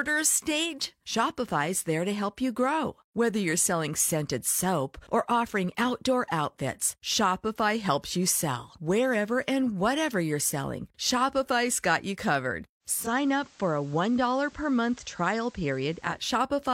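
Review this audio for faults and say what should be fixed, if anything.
At 12.80 s, just after "got you covered", the radio blends from digital to its FM analogue feed over about 354 ms, dropping about 1 dB and adding hiss around 30 dB down, then blends back at 16.29 s. That gradual cross-fade with hiss, rather than a hard gap, separates it from a dropout. Prevent it by improving digital reception or recording from a digital-only source with blending disabled.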